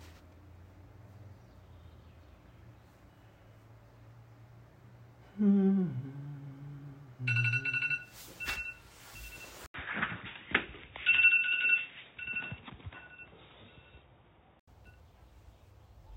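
At 9.66 s an 80 ms gap opens, then the sounds turn dull and boxy, with nothing above 3.8 kHz, a modest level shift and a faint new noise floor, until 14.68 s. The likely cause is an input switched to a poorer device. On a spectrogram the top band vanishes abruptly, and the waveform shows a brief flat gap.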